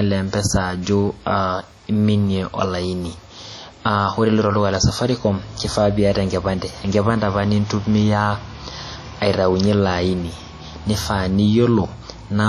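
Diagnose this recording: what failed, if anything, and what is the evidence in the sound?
WMA compression throughout, at the codec stage: heavily washy, ringing speech with breathing hiss and nothing above 18.3 kHz, likely long-block quantisation noise from a roughly 32 kbps encode.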